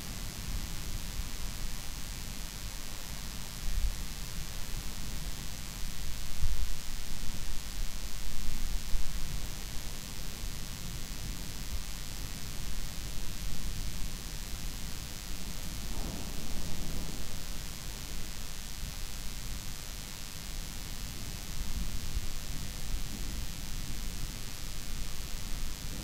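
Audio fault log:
Throughout: DECT cordless phone buzz. A nearby cordless handset or base station sends a radio burst every 10 ms, and the audio circuitry rectifies that RF into a 100 Hz buzz rich in harmonics, sitting roughly 15 dB below the sound. Mains hum sits at 50 or 60 Hz and is smoother. This buzz comes from sharp pulses at a 100 Hz repeat rate, so it sounds steady and thin, with a dense stack of upper harmonics.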